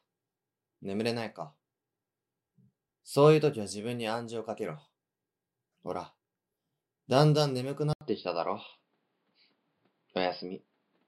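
The input likely switched to a poorer device at 7.93 s: after an 80 ms gap, the sound turns dull with nothing above 5.1 kHz, shifts a few decibels in level, and carries a faint new noise floor.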